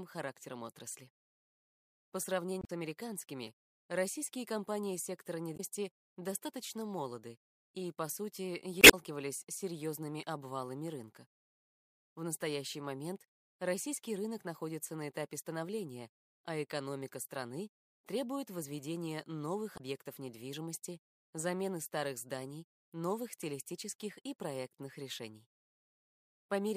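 Damaged data in a compressed stream, at 2.60 to 2.70 s, 5.53 to 5.60 s, 8.80 to 8.94 s and 19.74 to 19.81 s: corrupted bytes make the decoder misread frames and lose sync while hunting the next header, producing short chirps or squawking blips.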